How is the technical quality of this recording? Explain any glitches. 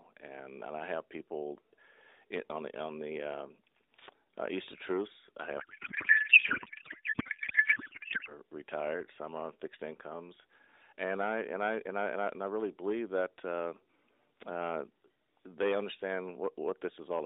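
The recording has one serious glitch. It plays through an AMR narrowband mobile codec, so the band stops at about 3.7 kHz with a light codec colouring that fits the 12.2 kbps mode.

From 5.60 to 8.34 s, just before "retired some are on", there is a codec payload misread. The sender packed AMR frames in octet-aligned form, but the receiver unpacked them as bandwidth-efficient, so every field landed in the wrong place. The speech turns into garbled noise and warble that barely follows it.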